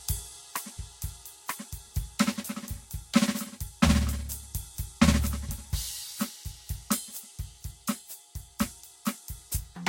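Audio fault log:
throughout generation loss: likely about five lossy re-encodes, each adding fresh quantisation damage, so the music sounds swirly, hollow and smeared, with nothing above 16.6 kHz.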